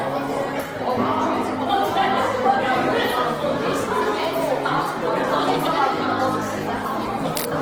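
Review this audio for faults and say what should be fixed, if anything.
Opus compression is plainly audible throughout the sound: textures turn grainy and rough rather than swirling, as the music-mode encoder fills starved bands with folded or noise content. Bandwidth remains full, up to about 20.2 kHz. The density of artefacts likely fits a bitrate near 16 kbps. To prevent it, encode at a substantially higher Opus bitrate or keep a lossless source.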